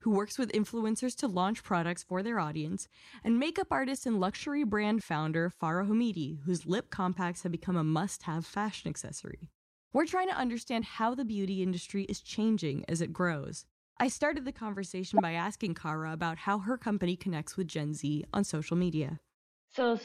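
A corrupt frame decoded at 15.15 to 15.20 s, just before "by asking", produces a glitch lasting about 50 ms, or roughly two frames of damage. Flipped bits inside the compressed data went undetected, so the decoder rebuilt those frames from wrong gain values and misread spectral codes. The result is a brief glitch that peaks around -10 dBFS and places energy at the wrong frequencies.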